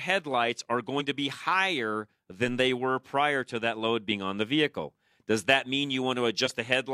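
Three brief skips break up this speech recording. At 0.96 s the audio jumps just before "to be higher". At 4.08 to 4.12 s it lurches from "prior to that load" into "on the vehicle does", and at 6.42 to 6.52 s there is another short lurch. These are compressed frames skipped. Whole frames went missing or were rejected by the decoder, dropping around 40 ms, about a tenth of a second, and around 40 ms again. At 2.48 s, between "to be higher" and "they were prior to", a single low thump sits under the speech. This is a DC step, a sudden jump in the waveform's zero line. The offset then drains away over a fraction of a second, as a roughly 2 Hz high-pass pulls it back.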